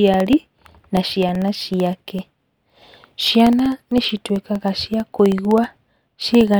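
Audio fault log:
0.08 to 6.54 s, periodic USB or driver dropouts: a recurring background task stalls the USB bus or audio driver every 64 ms, and each stall drops roughly a millisecond of audio, filled with silence. Around a hundred of these gaps fall evenly through the speech, so the voice carries a steady ticking at about 16 per second. The clicks come from the abrupt cut to zero and back, and they are heard only while speech is present.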